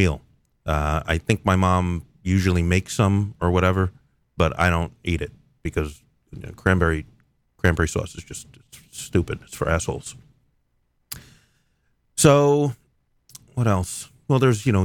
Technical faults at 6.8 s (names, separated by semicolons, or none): hard clipping